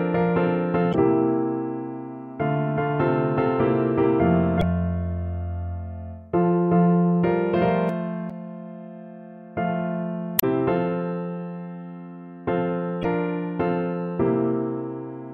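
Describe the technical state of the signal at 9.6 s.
At 9.6 s the signal is intact, with no dropout, distortion, glitch or other technical fault to be heard at that moment.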